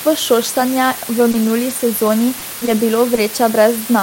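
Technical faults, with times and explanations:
Throughout: low bit depth with dither. The audio carries only 5 bits per sample, and dither was added before rounding, so the quantisation error is spread into steady white noise instead of distortion. The result is a constant, even hiss sitting only about 10 dB below the speech. It is loud enough to be obvious in every pause, yet it stays smooth and grain-free rather than crunchy or gated.
1.31 to 1.35 s: short concealed packet loss. About 20 ms failed to arrive in time. The receiver bridged the first 20 ms by extending the preceding sound, carrying its pitch forward or producing shaped noise, and then blended back into real audio. The rest of the hole was rebuilt from error-correction data, described below. This can be heard as a brief smear or wobble at 1.31 s.
1.33, 1.43, 1.47 and 1.69 s: lost packet rebuilt from error correction. Four separate 20 ms packets were lost. 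The packet following each one carried a low-bitrate backup copy, and the decoder played that copy, so no gap opens. Because each copy holds less detail than the original, these four moments sound rougher and noisier. They come across as quick dips in clarity rather than dropouts.
2.07 to 3.27 s: scattered short gaps. Over this stretch packets went missing here and there, leaving roughly four small holes of up to about 20 ms each. Around 70 ms in total was patched by continuing the previous sound, about 7% of the span. A further 140 ms was replaced with rougher error-correction copies. Brief ticks, smears and hiccups recur through this section.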